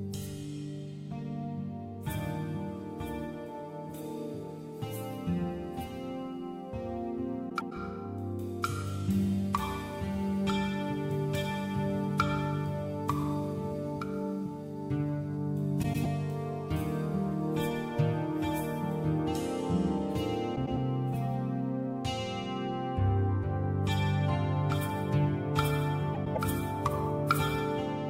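Frames out of order garble the audio at 7.49–7.72, 15.83–16.06, 20.55–20.76 and 26.14–26.38 s, where two adjacent blocks of about 104.5 ms swap places, with no time lost. Each sounds like a brief flutter, and the joins show as abrupt spectral discontinuities on a spectrogram.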